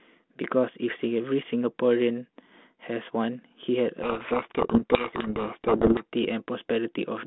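Speech over a G.726 link at 32 kbit/s, band-limited to roughly 200 Hz to 3.5 kHz. From 4.02 to 6.05 s there's a codec payload misread. The decoder takes the G.726 code words in the wrong bit order, so the speech sinks under harsh distortion.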